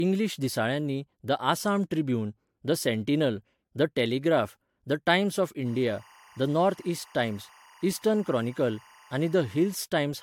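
A speech recording carries generation loss from start to finish. It sounds swirly, smeared and hollow, consonant attacks blur, and nothing is heard above 19.3 kHz. The likely cause is about three rounds of AAC-LC encoding, each around 96 kbit/s, stacking quantisation noise on shifting frame grids. From 5.66 s to 9.75 s, timecode bleed adds a steady chirping warble behind the speech, about 30 dB below it. It flips between pitches near 1 kHz and 2 kHz, pointing to linear timecode at 23.976 frames per second leaking from a nearby track or cable.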